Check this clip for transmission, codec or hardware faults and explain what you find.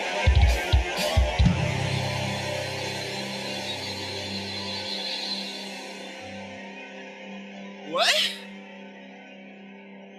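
One fault runs through the whole clip. Held sound and decaying tails keep dipping by around 5 dB while onsets come through intact, so the level pumps and thins. A speech-tuned noise suppressor applied to music or sounds is treating sustained content as noise and turning it down.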